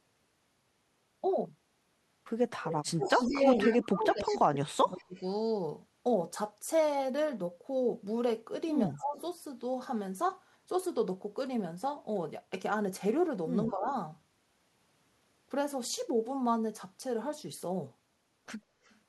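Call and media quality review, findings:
Echo leak, 2.58–4.38 s, 4.99–5.2 s, 8.95–9.21 s, 13.68–13.91 s, 18.85–18.97 s. Delayed second copy of speech trailing by 150 ms, loudest in first span (roughly 15 dB under speech), faint elsewhere. Likely far-end loudspeaker pickup not fully cancelled by echo canceller. Spectrogram: harmonic pattern repeated, shifted 150 ms right, weaker; waveform shows smeared ghost envelope.

Speech suppressed in double talk, 2.93–5.15 s (about 2 s affected, deepest drop roughly 35 dB), 8.87–9.19 s (roughly 20 dB), 13.73–13.89 s (roughly 15 dB). Talker dips, thins, chops out. Likely echo canceller unable to separate talker from loudspeaker echo, attenuating both. Waveform: envelope gouged in pieces; spectrogram: upper bands vanish, gaps across energy.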